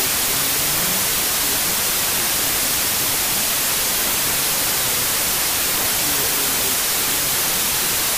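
From start to end the audio has a wrong sample width fault: samples written as packed 24-bit integers are being read as 16-bit integers. Each three-byte sample is split across two-byte reads, so most values are built from mismatched bytes and only some keep the real signal's top bits. It sounds like loud noise with the original buried inside, playing at 0.667 times speed and pitch. On a spectrogram, dense broadband noise fills the band, with traces of the original structure stretched in time and shifted down. The waveform looks dense and noise-like.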